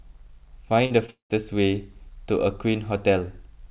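At 0.86 to 0.92 s there is a short concealed packet loss: about 40 ms of audio never reached the decoder in time, so the receiver stretched the preceding sound and blended back into real audio, leaving a quick smear. A second, 20 ms loss at 1.06 s sounds like a brief wobble. What separates these from a dropout is that each is patched over in a few hundredths of a second and the speech carries straight on.

Directly after, from 1.10 to 1.32 s, the speech stops for about 200 ms, most likely a long network dropout. The concealed tail fades into a buzz or hiss, and roughly the last 130 ms is silence before speech resumes further on, with the missing stretch simply gone. Unlike the short losses, the gap is long enough that concealment runs out and the silence is audible. Throughout, the narrow telephone band with nothing above 4 kHz fits a G.711 mu-law call path at 64 kbps.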